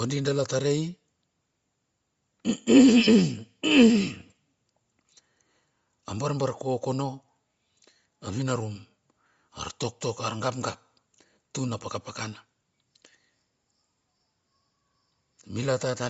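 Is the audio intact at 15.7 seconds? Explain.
No. At 15.7 s the speech carries plainly audible codec damage, present throughout the clip. It is likely Bluetooth LC3 compression. The upper spectrum sounds emptied and refilled with noise, giving a breathy, grainy edge. This fits a low bitrate near 32 kbps.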